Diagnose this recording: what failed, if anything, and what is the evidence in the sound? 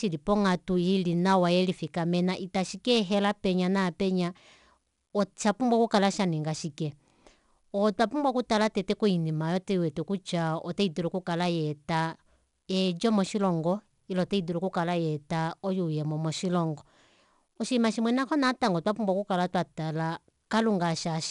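Gritty hiss rides every loud syllable throughout, with nothing above 10.7 kHz. This is 4-bit ADPCM compression at the codec stage: coarse adaptive steps leave noise that follows the level.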